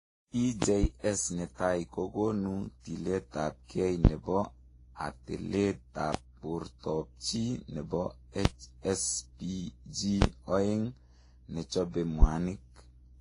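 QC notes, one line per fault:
Throughout: transcoding between lossy codecs. Nothing is present above 10.5 kHz, and two different kinds of coding damage sit on top of each other. This is likely a low-rate Vorbis-style encode passed through a different codec and then back to a low-rate Vorbis-style encode. Each stage re-spent bits on the earlier artefacts, so the mixed textures distinguish it from a single low-bitrate encode, which would show only one consistent kind of artefact.
8.45–8.49 s: loud pop. A single sharp pop lasts about 40 ms and peaks at about 25 dB above the speech. The speech continues unbroken beneath it, so this is an added pulse, not a dropout or edit. Its cause is likely an electrical step or transient from a plug, switch, static or driver glitch, shaped by the circuitry that followed. It is longer and fuller than a tick-like digital click, which would last only a sample or two.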